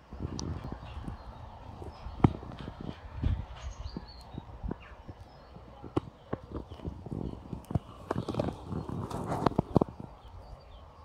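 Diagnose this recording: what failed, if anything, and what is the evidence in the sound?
At 0.64 s, 5.96 s and 10.28 s the sound jumps abruptly, with no silent gap at any point. This points to the driver or buffer stage, most likely a dropped buffer (overrun), where the capture program fell behind and the hardware overwrote samples before they were read. Roughly 40 ms is lost at the first and third points and about 70 ms at the second. Unlike a dropout, nothing goes quiet: the two sides are spliced straight together.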